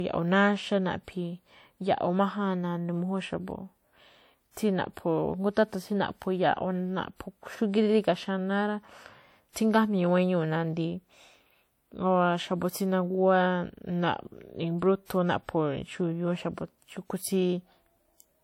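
Throughout the speech, the audio keeps the coding artefacts of a low-rate encoding, with nothing above 20.1 kHz. The likely cause is low-bitrate audio saved at a high bitrate, which fits 64 kbit/s WMA re-encoded as 320 kbit/s MP3. The second pass cannot restore what the first removed.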